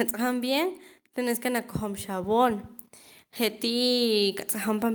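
Speech recorded through a device whose automatic gain control keeps readjusting. From 0.05 to 0.9 s there is automatic gain falling. The control found the input too loud, or its background noise too strong, so it eased its gain down by about 4 dB. Voice and background sink together. Automatic gain rising follows twice. From 1.14 to 2.71 s the gain climbs by about 6 dB. It rises again from 3.37 s to the end. Both times the control judged the input too quiet. Speech and room noise swell together over more than a second.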